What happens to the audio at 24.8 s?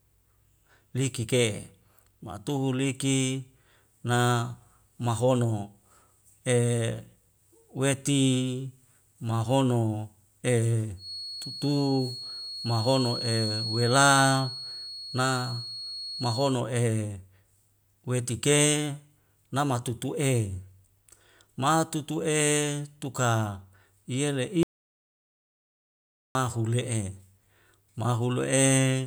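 At 24.8 s the speech is inside an audio dropout to silence running from 24.63 to 26.35 s. The signal cuts to silence for about 1.72 s, with no room tone, then resumes mid-flow. The likely cause is a lost input while recording continued.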